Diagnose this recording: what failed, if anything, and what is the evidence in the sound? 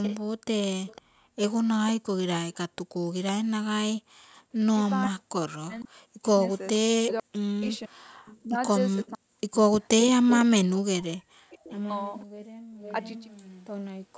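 Echo leak, 0.03 to 3.32 s and again from 4.87 s to the end: a delayed copy of the speech trails the original by 504 ms, at about 15 dB below it in the first stretch and about 20 dB below in the second. This is a call-processing failure, likely a far end on loudspeaker whose echo canceller left residual pickup of its own speaker output, which was sent back down the line.

Background gated by the echo canceller, 1.02 to 4.45 s and 12.26 to 12.72 s: the room sound drops out abruptly, by about 39 dB in the first window and about 40 dB in the second. Altogether it is gone for roughly 0.7 s and then about half a second. The canceller's suppressor clamped the microphone path hard while loudspeaker signal was present, then released it, so the ambience switches off and returns.

Speech suppressed in double talk, 5.09 to 11.45 s: the talker's speech dips sharply and breaks into pieces, with drops reaching around 40 dB and roughly 3 s lost in total. 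This is again in call processing, likely the echo canceller failing to tell local speech from loudspeaker echo while both sides talked, and attenuating everything it picked up. The call's microphone high-pass and the 8 kHz bandwidth limit are as expected.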